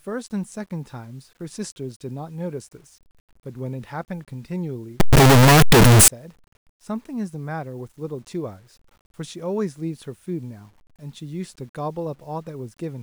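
From 5.0 to 6.08 s, the speech turns into a loud, harsh roar. Quiet stretches blast at the same level as the rest. This is heard as signed and unsigned mixed up. The likely cause is 8-bit samples read with the wrong sign convention. That flips the top bit of each sample. Every zero crossing then leaps across the full range.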